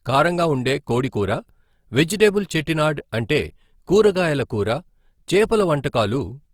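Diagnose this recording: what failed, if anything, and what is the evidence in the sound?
Opus compression, throughout the speech, at the codec stage. The sound keeps its full bandwidth, yet plainly audible grain and roughness replace clean detail, likely from Opus in CELT mode refilling bit-starved bands with folded or noise content, consistent with a 24 kbps stream.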